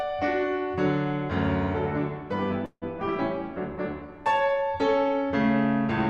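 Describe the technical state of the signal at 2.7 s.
At 2.7 s the music hits a call audio freeze, running from 2.65 to 2.84 s. The last sound stretches into a fading buzz or hiss that drops to silence, then the music picks up where it left off. It's likely late packets draining the jitter buffer.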